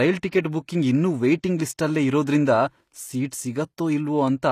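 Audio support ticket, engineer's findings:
Whole clip: gritty, lispy sibilants, treble bright but synthetic, cut above 14.9 kHz; likely HE-AAC compression, band replication copying lows upward, fits 24 kbps. Unlike a plain lowpass, treble persists.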